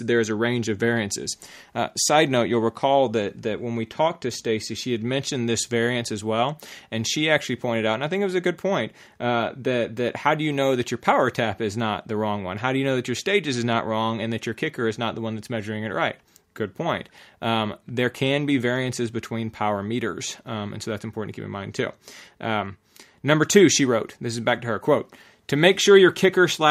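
No technical faults can be heard anywhere in this speech recording, and the signal stays steady and intact throughout.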